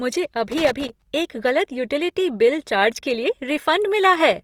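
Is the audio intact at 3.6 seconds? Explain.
No. At 3.6 s, as throughout the speech, plainly audible Opus compression is likely at work: bands starved of bits are filled with folded or noisy content, so the sound turns grainy and rough rather than swirly like MP3. It reaches about 20.3 kHz, consistent with roughly 24 kbps.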